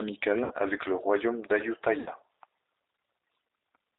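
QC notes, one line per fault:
Throughout: G.729 codec damage is plainly audible. The sound is band-limited with nothing above 4 kHz, and it has a rough, slightly synthetic edge. That fits an 8 kbit/s G.729 stream rebuilding each short frame from a tract filter, pitch predictor and a few pulses.
0.44–0.54 s and 2.00–2.10 s: VoIP packet loss concealed by the speech codec. About 60 ms goes missing each time, which fits three lost packets. The decoder stretches its last pitch and filter into a sound that fades, and the sound stays weak afterward because each frame builds on the previous one. The first gap lands just before "avec le royaume", and the second comes just after "avec le royaume".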